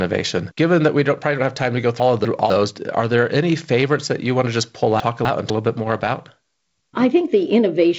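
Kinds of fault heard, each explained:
Chunks out of order: at 2.0 to 2.5 s and again at 5.0 to 5.5 s, two 250 ms pieces of the speech trade places, so one plays a chunk late, after the piece that should follow it. Each swap leaves three hard joins, and the moment sounds jumbled rather than gapped or stuttering. Nothing is missing and nothing repeats, which sets it apart from a dropout or a stuck, looping buffer.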